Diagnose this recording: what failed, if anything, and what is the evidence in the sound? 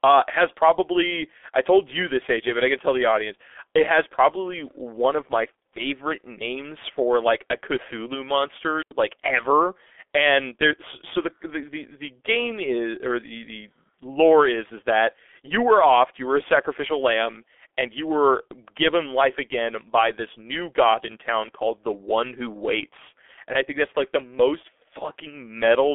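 The whole take has gone through a low-rate speech codec, and it sounds like G.723.1 running at about 6.3 kbit/s. Nothing comes through above 3.8 kHz, the band sits roughly 250 Hz to 3.5 kHz, and the slow voice model leaves speech muffled and hoarse with smeared consonants.

There's a digital wireless dropout on the radio link from 8.82 to 8.91 s, right before "like ever". The receiver lost too much data and muted for about 89 ms. You hear a clean hole of near silence with a quick fade and no noise burst on either side.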